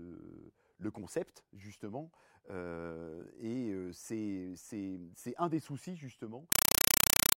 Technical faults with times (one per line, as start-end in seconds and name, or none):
6.52-7.38 compressed stream played as audio